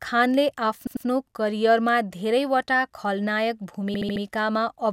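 At 0.87 to 1.06 s, repeated frames cause a stutter. A 96 ms block of speech plays twice more. At 3.94 to 4.23 s, a 72 ms block repeats four extra times.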